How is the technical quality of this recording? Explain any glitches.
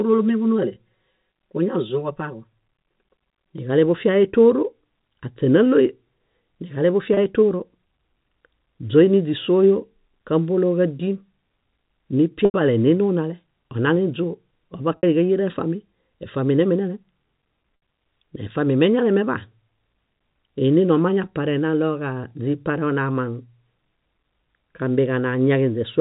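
The recording has telephone bandwidth, with nothing above 4 kHz, consistent with G.711 coding. It has two kinds of fault.

Channel delay (comb filtering) runs from 0.0 to 3.58 s. One channel lags by around 5 ms before the mix to mono. Cancellations start near 100 Hz and repeat evenly. The speech sounds hollow and phasey.

Packet loss with pitch repetition occurs at 7.14 s (30 ms), 12.45 to 12.54 s (90 ms), 14.97 to 15.03 s (60 ms), and 17.76 to 17.82 s (60 ms). The receiver loops the last pitch cycle to fill each gap. The shortest sounds like a brief buzzy hold. The 90 ms gap fades toward silence before the speech returns.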